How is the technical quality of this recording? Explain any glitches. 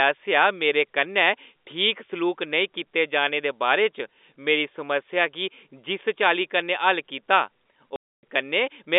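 The recording has one clear glitch near the end, heard through a narrow telephone-style band of roughly 250 Hz to 3.6 kHz, which fits G.711 telephone coding.

Packet loss filled with silence occurs from 7.96 to 8.23 s. A run of packets never arrived, and the receiver inserted pure silence for their duration instead of concealing the gap. The hole lasts about 270 ms, which fits roughly 27 packets of 10 ms each. The speech drops out abruptly, with hard edges at both ends where the waveform is cut off and then resumes.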